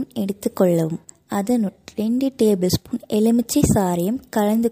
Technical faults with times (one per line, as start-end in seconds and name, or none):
1.67-1.69 compressed frames skipped